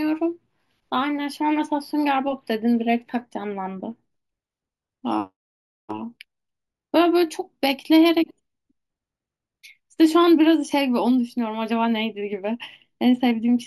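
Throughout the speech, the sample rate appears to have been raised by simply repeating samples with no smoothing filter, which fits a 16 kHz to 48 kHz conversion. This imaging from sample-and-hold upsampling mirrors the spectrum into 8 kHz to 16 kHz, about 23 dB down, heard as a bright metallic fizz that tracks the voice.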